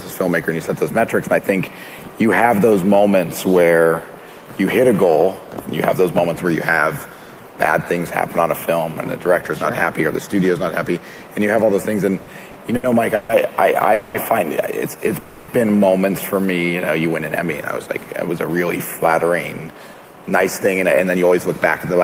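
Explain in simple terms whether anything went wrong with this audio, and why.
Packets arrived late again and again between 12.22 and 13.31 s, so the receiver kept stretching the last sound to fill four short gaps. These repeated stalls (stutter) make the audio drag and hiccup.

Packets were most likely held up on the way at 13.93 to 14.16 s and again at 15.20 to 15.50 s. The receiver ran out of audio and held the last sound as a fading buzz. Each call audio freeze adds a pause of 0.21 s or 0.28 s.

From 18.29 s to the end, the receiver trimmed tiny slices to catch up after the hold-ups. This jitter buffer speed-up plays the sound about 6% faster at the same pitch, so it feels hurried.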